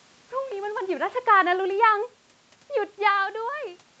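From 1.27 s to 2.11 s the level sinks by about 3 dB as automatic gain falling sets in: the gain control judged the input too loud or its background noise too strong and eased its gain down over that stretch. What separates this from the talker shifting position, which happens around half a second and again near 3 s, is that the room noise drops in step with the speech, whereas a talker leaning away leaves the background level untouched.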